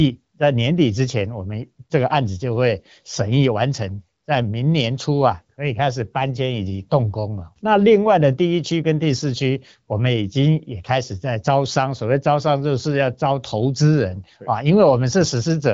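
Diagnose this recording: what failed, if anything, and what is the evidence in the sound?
Nothing failed; this is an HD Voice wideband call path.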